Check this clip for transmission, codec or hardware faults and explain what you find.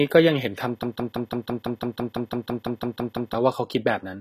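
Two faults are audible: codec damage across the whole clip, and a stuck loop near the start.

HE-AAC compression, throughout. The speech carries plainly audible codec damage. Nothing is present above 14.9 kHz. This is likely HE-AAC at a low rate, which fits roughly 20 kbps. Only the lower band is truly coded. The treble is rebuilt by copying lower bands upward under a coarse envelope. Those copied harmonics do not align with the real ones. The top end sounds synthetic, and sibilants turn gritty and metallic.

Broken-record loop, from 0.83 to 3.34 s. A 167 ms fragment repeats back to back, about fifteen times. Each repeat is identical. The cause is likely a stalled player or stream that kept resending its last buffered piece. The speech that belonged in those two and a half seconds never arrives. It sounds like a rapid, mechanical stutter, then normal speech resumes abruptly.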